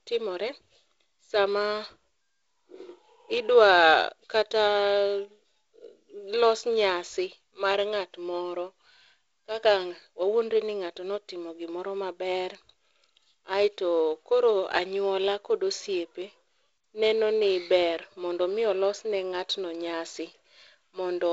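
Nothing technically wrong can be heard in this speech clip. It carries the character of G.722 wideband telephone coding, with no content above about 7.7 kHz and a light coding grain that fits the 48 kbit/s mode.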